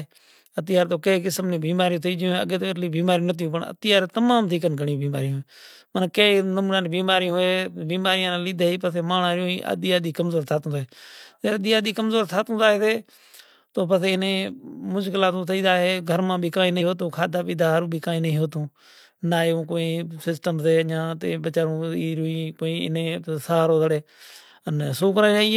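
At 16.77 s, damaged data in a compressed stream breaks into the speech for about 50 ms. Corrupted bytes make the decoder misread the frames and lose sync. It hunts for the next frame header. The result is a brief glitch in the speech.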